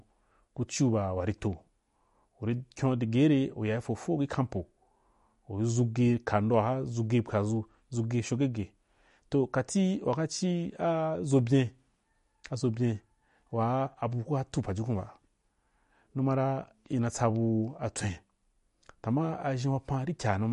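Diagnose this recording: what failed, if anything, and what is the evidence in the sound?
MP3 compression damage runs through the whole speech recording, pointing to the codec stage. Nothing is present above 11.2 kHz, a hard treble ceiling, and the artefacts are plainly audible: a watery, swirling texture with chirpy sibilants and smeared consonant onsets. The likely cause is an MP3 encode starved of bits, around 48 kbps, where the encoder lopped off the top band and let weak spectral lines flicker on and off between frames.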